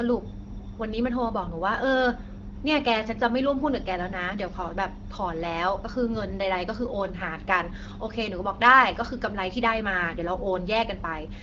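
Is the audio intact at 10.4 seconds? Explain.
Yes, at 10.4 seconds the speech comes through intact, carried cleanly by the AMR wideband (HD Voice) codec at 12.65 kbit/s with no dropout, glitch or other fault at that moment.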